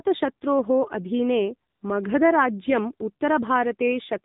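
From the start, the speech carries the AMR narrowband mobile codec. The sound is sampled at 8 kHz, so nothing above 4 kHz survives. The voice sounds boxed in and dull. A vocal-tract model rebuilds each 5 ms from 2 to 10 pulses. At this low rate the result is buzzy and synthetic, and the damage is plainly audible. The coarseness fits a mode around 7.4 kbps.

From 1.70 to 1.82 s, AMR comfort noise takes over. The phone judged the talker silent and stopped sending speech frames for 120 ms. The receiver filled the gap with synthetic noise built from a rough level and spectrum. The real background vanishes there. A smooth, steady hiss switches in, then switches back out.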